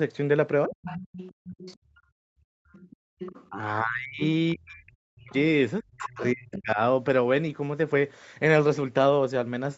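At 0.68 s the speech briefly sinks, for about 0.07 s, by roughly 10 dB. This is speech suppressed in double talk. The likely cause is both ends talking at once. The echo canceller could not tell the local voice from loudspeaker echo, so it turned everything down. The dip is short and shallow here.

From 0.7 to 2.0 s a second, quieter voice sits under the speech. This is the other side's voice leaking through, likely loudspeaker echo the canceller failed to remove. It runs about 15 dB below the main speech.

From 1.77 to 3.19 s the room sound drops away. This is background gated by the echo canceller. While the far side played, the canceller clamped the microphone hard, by about 38 dB at the deepest. The gating adds up to around a second in total. The ambience returns when the canceller releases.

From 2.72 to 3.5 s the leaking far-end voice returns, likely echo again, about 15 dB down.

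From 3.49 to 6.78 s comes a much heavier case of double-talk suppression, likely from the two sides overlapping once more. The speech is pushed down by up to about 40 dB. The cuts add up to roughly two seconds.

Within that stretch, the leaked voice appears twice. The first is a faint scrap at 5.3 s, about 30 dB down. The second runs from 5.99 to 6.61 s, about 15 dB down. Both are likely residual echo. Throughout, the call's 8 kHz bandwidth limit can be heard as a dull top end.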